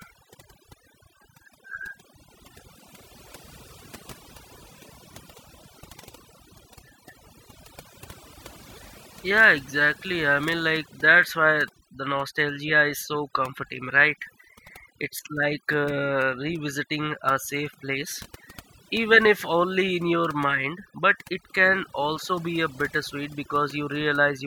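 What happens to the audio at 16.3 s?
Overdone noise removal is at work at 16.3 s, as it is across the whole clip. The noise reduction was pushed too hard, so any frequency band that sits close to the estimated noise floor gets pulled far down or switched off, and the softer parts of the speech are cut away along with the noise. The background drops and breaks up into twinkling specks.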